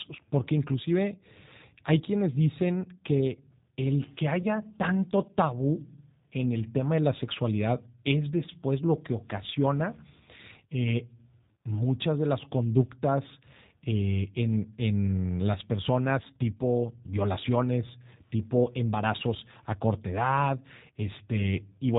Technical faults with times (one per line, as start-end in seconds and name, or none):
0.00-21.99 G.729 codec
4.42-4.46 VoIP packet loss concealed by the speech codec